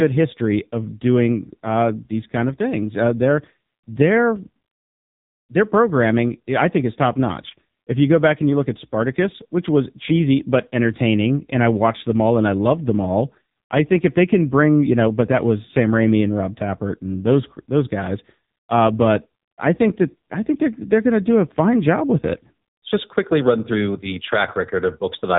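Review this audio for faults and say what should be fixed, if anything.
Throughout the speech, the AMR narrowband mobile codec leaves heavy damage. Nothing passes above 3.8 kHz, and the voice sounds buzzy and synthetic, which fits a low mode near 6.7 kbps. A simple telephone-band filter would only dull the top end without adding that buzz. To prevent it, capture or route the call through a wideband or higher-rate codec.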